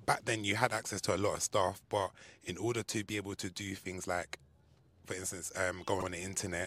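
Repeated frames at 6.00–6.05 s, just after "for instance": a 52 ms block, likely a couple of compressed frames, plays twice, causing a brief stutter and lengthening the speech.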